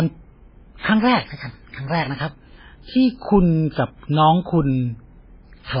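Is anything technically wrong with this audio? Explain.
Yes. Throughout, the speech is heavily damaged by what is likely MP3 compression at a very low bitrate, around 16 kbps. Nothing remains above 5.2 kHz, and the encoder, short of bits, drops weak frequency lines that flicker between frames. The result is a watery, swirling texture rather than the steady dullness of a simple low-pass filter.

Pre-echo occurs from 0.78 to 0.83 s (about 58 ms) and from 3.72 to 3.76 s (about 47 ms). Sharp attacks fell late in a transform block, so quantisation noise sized for them spread backwards into the quiet before them. Each is heard as a brief hiss ahead of a softened onset, which sets it apart from a true echo, since an echo follows the sound.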